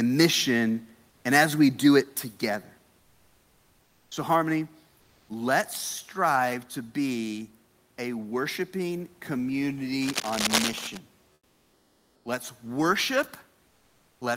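At 2.04 s the whole signal, speech and room background alike, drops abruptly by about 5 dB in a single step. That's the microphone volume stepped down, most likely the call software deciding the input was running hot and cutting the device gain in one move.

Then come three stretches of comfort noise in place of the background: 2.99 to 4.11 s, 4.97 to 5.29 s, and 11.33 to 12.25 s. In each pause the real room tone, sitting about 39 dB under the speech, gives way to a flat, featureless hiss about 1 to 3 dB quieter. That likely means the sender stopped transmitting during silence, which fits something like Opus DTX, and the receiver filled the gap with synthetic noise.

From 10.02 to 10.98 s there's a burst of rough, uneven scratching roughly as loud as the speech itself. That's cable scratch noise, likely a worn connector or lead being moved so its contact resistance jumps around and sprays crackly noise over the signal for just under a second.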